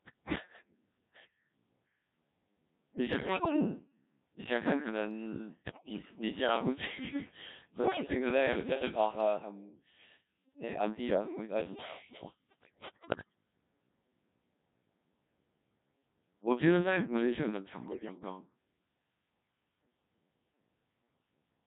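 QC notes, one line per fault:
throughout: Codec 2 vocoder. The speech sounds robotic and buzzy with a synthetic tone, heavily damaged at about 1.3 kbit/s. The decoder rebuilds each frame from pitch, voicing, energy and a coarse spectral envelope using sine waves, so the original waveform is never kept.
3.13–3.56 s, 5.65–6.02 s, 7.72–8.14 s, 12.49–13.36 s, 17.88–18.21 s: bit errors on digital voice radio. The voice lurches in pitch and level, its colour shifts, and it breaks into warbling, bleeping gibberish. Around a tenth of bits or more arrive flipped, each corrupting a whole frame's parameters.
17.49–17.51 s: loud pop. A single sharp crack jumps roughly 15 dB above the speech, which carries on underneath. The likely cause is a brief voltage spike, for example from static or a switch, added to the signal and shaped by the downstream circuitry.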